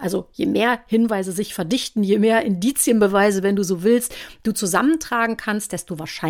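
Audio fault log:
No faults to log in this speech clip.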